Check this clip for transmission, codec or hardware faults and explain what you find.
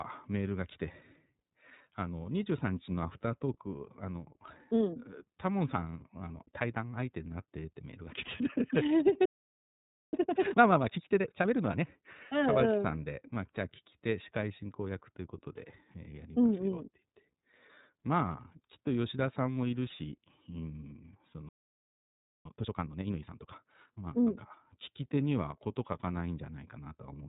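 Three kinds of fault are present: narrowband codec damage throughout, and two silent stalls, each followed by a hurried catch-up.

iLBC codec, throughout: the speech has passed through the iLBC narrowband VoIP codec. Each frame's excitation is coded independently, and the rough, slightly synthetic texture fits its 30 ms frame mode at around 13.3 kbps. Nothing above 4 kHz passes, so the speech loses its upper detail, and the coding damage is plainly audible as a grainy, buzzy edge on the speech.

Playback stall, from 9.25 s to 10.13 s and from 21.49 s to 22.45 s: the output drops to silence mid-flow for about 0.87 s and then about 0.96 s. The likely cause is that the player ran short of buffered data, or its output thread was blocked, so it had nothing to send to the device until it recovered. Both times the sound cuts off abruptly and the silence is clearly audible.

Time-compressed catch-up, from 10.13 s to 11.87 s and from 22.45 s to 24.37 s: once playback resumes, the player clears its accumulated backlog by dropping short pieces of audio and cross-fading across the gaps. 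This runs the speech at 1.5 times normal speed while keeping its pitch. The speech sounds rushed for about 1.7 s and then about 1.9 s.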